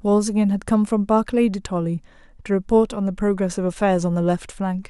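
No technical faults can be heard anywhere in the recording; the signal stays continuous and steady in level throughout.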